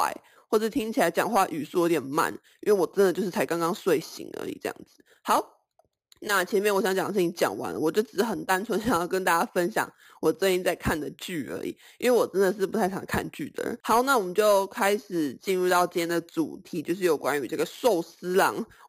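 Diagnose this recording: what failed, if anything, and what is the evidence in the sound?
A bright, metallic fizz rides on the speech for the whole clip, rising and falling with it, about 18 dB below the voice and sitting between roughly 5.5 and 11 kHz. This is imaging from sample-and-hold upsampling at the rate-conversion stage. The pattern fits an 11 kHz source raised to 44.1 kHz by repeating samples without an interpolation filter, leaving mirrored spectral copies.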